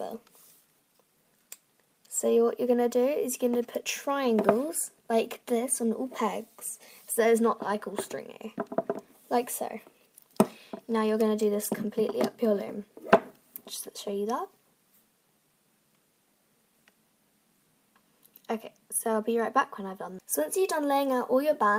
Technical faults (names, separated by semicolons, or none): none